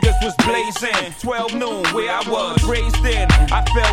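No faults detected on this listen.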